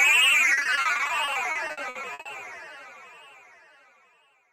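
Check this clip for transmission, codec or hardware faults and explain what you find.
There is one fault: repeated packet loss, heard as robotic sound. From 0.53 to 2.27 s, short stretches keep dropping out, the longest about 60 ms. Each hole is filled by extending the previous sound, about a third of that span in all. The result is choppy and broken.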